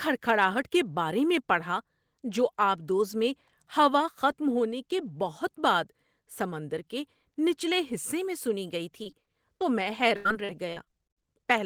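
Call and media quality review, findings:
Repeated packet loss (robotic sound), 9.03–9.62 s: a brief choppy patch in the speech with short holes, the longest about 20 ms. The jitter buffer/concealment stretches the last audio over each gap. Network-side loss.

Repeated packet loss again, 10.16–11.27 s, and worse: a denser run of dropouts, longest around 83 ms, with roughly a quarter of that stretch filled by concealment. Choppy, with chunks missing. Same mechanism, heavier burst.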